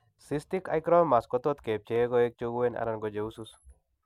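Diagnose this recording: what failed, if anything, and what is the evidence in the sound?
Three sharp, isolated clicks in the speech, at 0.57, 1.96 and 2.84 s, each a thin vertical line straight up the spectrum. That's the signature of dropped samples: a fraction of a millisecond goes missing, so the waveform jumps to a later value and the discontinuity clicks, but nothing audible is lost. The likely culprit is the driver or buffer stage briefly failing to deliver a handful of samples on time.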